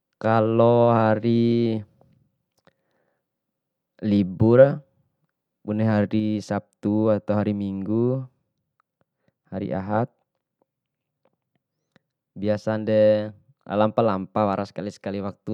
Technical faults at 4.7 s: none

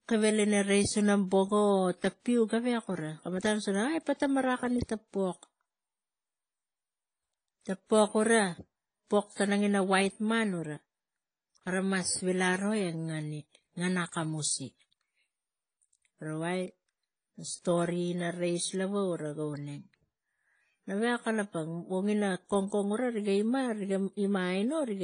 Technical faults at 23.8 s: transcoding between lossy codecs

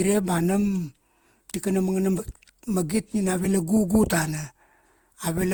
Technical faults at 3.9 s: generation loss

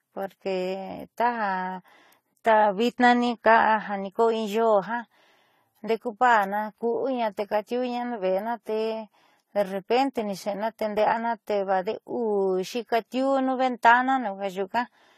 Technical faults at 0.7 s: transcoding between lossy codecs

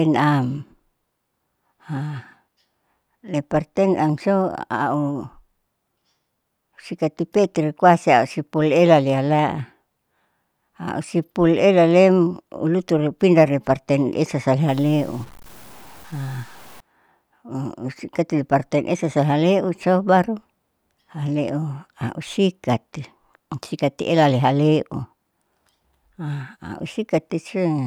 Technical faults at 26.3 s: none

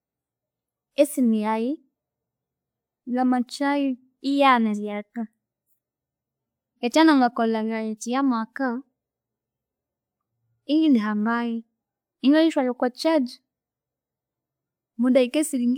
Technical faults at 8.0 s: none

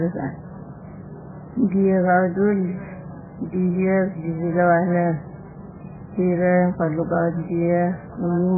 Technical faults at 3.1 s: MP3 compression

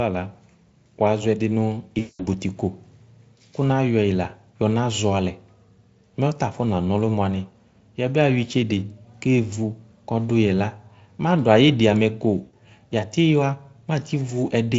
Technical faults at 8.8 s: none

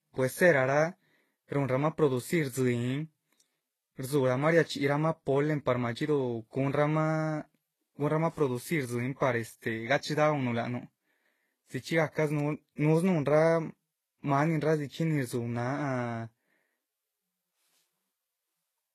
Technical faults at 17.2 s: transcoding between lossy codecs

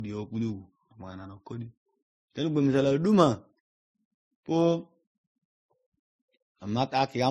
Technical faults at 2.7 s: transcoding between lossy codecs

